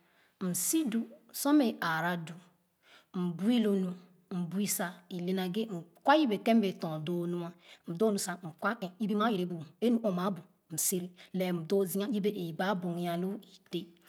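A time-stretched section runs from 7.49 to 12.13 s, likely software squeezing the speech to 1.5 times speed while holding pitch, so it sounds rushed.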